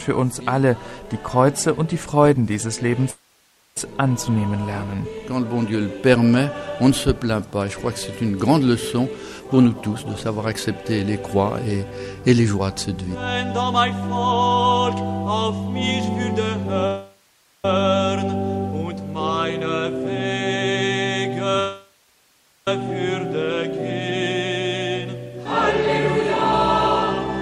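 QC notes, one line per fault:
3.10–3.77 s, 16.87–17.65 s and 21.60–22.68 s: call audio freeze. The audio stops and a fading buzz carries the last sound forward. It then falls silent for about 0.55 s, 0.41 s and 0.71 s, and resumes where it left off. Gaps of about 0.66 s, 0.77 s and 1.07 s are inserted with nothing lost, likely from packets held up until the jitter buffer ran dry. On a spectrogram, a smeared decaying band leads into blank columns. The waveform shows a tapering envelope, then a flat line.
9.40–12.55 s and 25.05–27.28 s: jitter buffer speed-up. The receiver trims pitch-period-sized slices in quick succession to work down an overfull buffer. The first stretch plays at 121% speed, losing roughly 0.7 s and sounding rushed. The second runs at 102%, with well under a tenth of a second removed, and is barely hurried. A spectrogram shows harmonics at unchanged heights but events packed closer together. 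The waveform shows many tiny splices with no gaps.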